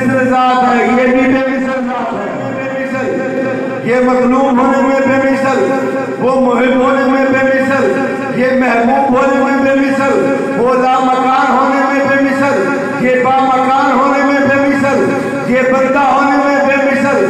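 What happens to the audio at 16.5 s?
Nothing goes wrong at 16.5 s; the audio plays through that moment intact, with no dropout, click or distortion.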